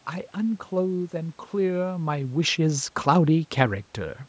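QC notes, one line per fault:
No faults found in this speech clip. Room noise sits underneath, content stops around 8 kHz as expected from the call's microphone processing, and the level shift near 1.5 s is the talker moving relative to the microphone.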